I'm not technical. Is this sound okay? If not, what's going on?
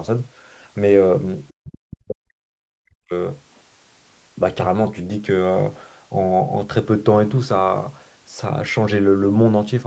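No. Speech suppressed in double talk, from 1.5 to 3.12 s: the voice is turned down for most of that stretch. Likely cause: both sides spoke at once, and the call's echo canceller, unable to tell this voice from loudspeaker echo, turned everything down.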